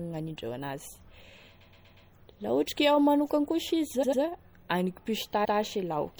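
Throughout the speech, the encoder appears to have been short of bits, likely from MP3 compression at a low rate that fits about 64 kbps. With too few bits, weak frequency lines drop in and out from frame to frame. The damage is plainly audible: a watery, swirling texture, metallic chirping on s sounds, and smeared attacks.

Repeated frames occur in three places, where a run of compressed frames was played more than once. From 1.60 to 2.08 s, a 120 ms block plays four extra times, adding 480 ms as a rapid stutter. From 4.02 to 4.21 s, a 96 ms block repeats twice more, adding 192 ms. From 5.44 to 5.58 s, a 144 ms block plays once more.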